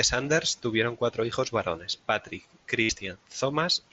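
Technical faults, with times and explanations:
1.31 s and 2.83 to 2.89 s, concealed Bluetooth headset packet loss: a barely noticeable blip at 1.31 s, then about 60 ms of buzzy, held tone ending in a slight warble. Lost packets were filled by repeating the best-matching recent waveform, which fits one and then eight 7.5 ms frames.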